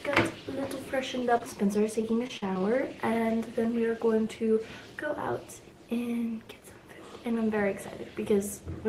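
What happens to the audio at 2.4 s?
At 2.4 s the audio is inside a burst of repeated packet loss (robotic sound), from 2.02 to 2.62 s. Five short dropouts, the longest 44 ms, are patched by stretching the preceding sound. Together they cover about a sixth of that stretch and make it choppy. On a spectrogram this shows as brief smeared, frozen slices with abrupt edges.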